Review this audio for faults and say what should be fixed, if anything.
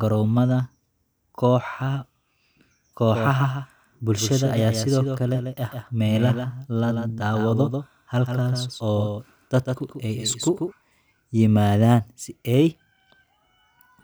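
From 3.10 to 10.72 s the speech has a doubled audio track: one full-band copy roughly 150 ms late and about 5 dB quieter, likely from a second, slower capture path. Unlike echo, it has no decay and no room colour, and it starts and stops abruptly. To prevent it, make sure each source reaches the mix through only one path.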